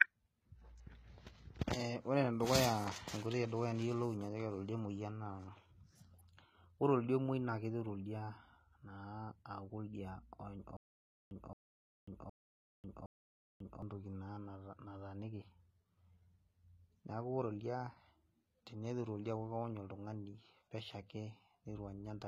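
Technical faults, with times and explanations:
Throughout: HE-AAC compression. The treble has a gritty, metallic edge, and s sounds come out lispy, because the upper spectrum is likely rebuilt from copied lower bands rather than coded directly. The plainly audible damage points to a low bitrate of around 20 kbps. On a spectrogram, the high band looks smeared and blocky, with harmonics that stop lining up across the crossover, and nothing appears above a hard ceiling at 14.9 kHz.
10.77 to 13.82 s: stutter with silent gaps. A 220 ms burst plays, then 544 ms of digital silence follows, and the pair repeats four times on an even 764 ms cycle. The likely cause is a playback stall, where each retry replays the last fragment and then runs dry. The audio that should have filled that span is missing. On the waveform, identical blocks sit between flat stretches of silence.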